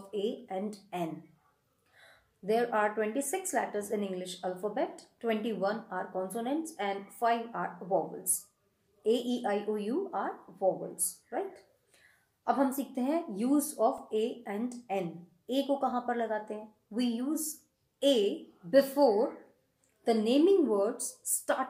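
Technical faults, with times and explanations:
13.98 s, repeated buffer: a piece about 1.45 ms long plays four extra times, which fits a 64-sample buffer. The hard joins make a brief click or buzz.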